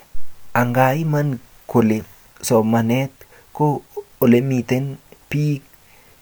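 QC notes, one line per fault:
Nothing stood out on listening to this speech recording.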